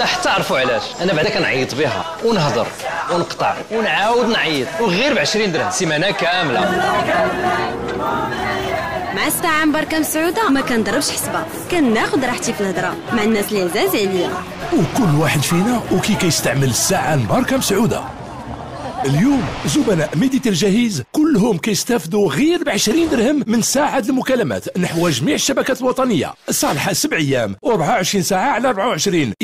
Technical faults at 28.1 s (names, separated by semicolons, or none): none